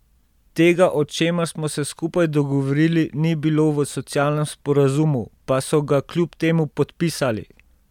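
Speech; no technical faults heard.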